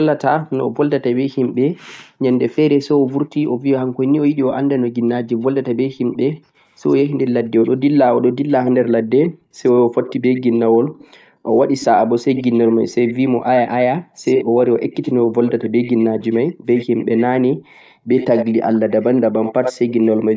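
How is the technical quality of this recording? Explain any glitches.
The recording has two recurring faults on a call path: the room sound keeps dropping out, and a delayed copy of the speech leaks back.

Background gated by the echo canceller occurs from 0.03 to 3.65 s, 4.61 to 6.16 s, 8.1 to 15.38 s and 16.48 to 20.29 s. The canceller pulled the microphone down hard while the far end played. Room sound dips by up to about 40 dB, then returns.

The echo leak appears from 1.87 to 1.96 s, 6.32 to 13.14 s and 14.36 s to the end. The first trace is very faint. Later stretches are far more audible, delayed by 117 ms and then 77 ms. This is likely loudspeaker pickup that the canceller failed to remove.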